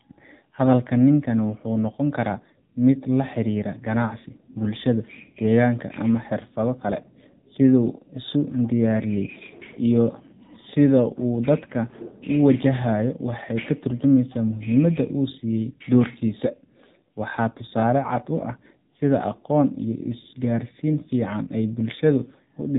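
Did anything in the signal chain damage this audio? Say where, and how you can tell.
Yes, at the codec stage, for the whole clip: AMR narrowband mobile coding. The speech has no content above 4 kHz. It sounds buzzy and synthetic throughout, which fits a low AMR-NB mode near 7.4 kbps. Few excitation pulses in each 5 ms rebuild the voice crudely.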